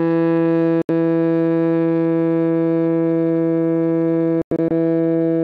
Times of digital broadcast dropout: 0.82-0.90, 4.42-4.71

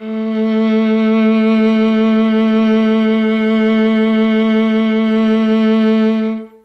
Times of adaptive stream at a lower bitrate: 1.53-5.53

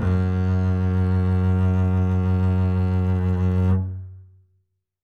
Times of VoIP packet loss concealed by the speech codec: none

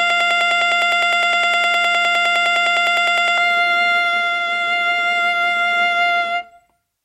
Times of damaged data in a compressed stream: none

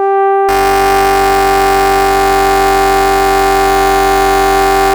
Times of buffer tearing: 0.48-4.93

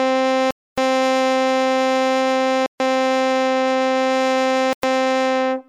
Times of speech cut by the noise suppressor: none

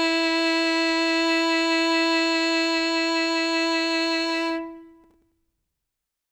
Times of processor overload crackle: 5.04-5.32

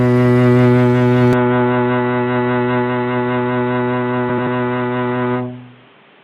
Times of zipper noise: none

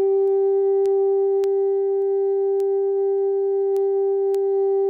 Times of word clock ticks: 0.28-4.35

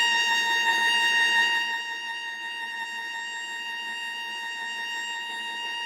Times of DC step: none

